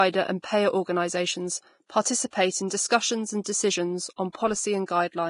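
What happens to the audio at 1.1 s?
At 1.1 s the speech carries the same Vorbis compression damage heard throughout: nothing above 10.6 kHz, and hissy, grainy treble with roughened tones. This is likely heavy low-bitrate coding, around 31 kbps, that lowers the cut-off and replaces fine high-frequency detail with noise.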